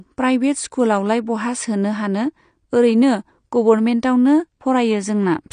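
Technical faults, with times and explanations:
Throughout, AAC compression: the speech sounds dull and smeared, with nothing at all above 9.7 kHz and a plainly audible warbly, fizzy texture on sustained sounds and sibilants. That's the likely signature of AAC-LC coding at a low rate, roughly what you'd expect around 32 kbps. The encoder runs short of bits, so it drops the top of the spectrum and quantises the remaining bands coarsely. That leaves patchy gaps that shift frame to frame and give the swirly character.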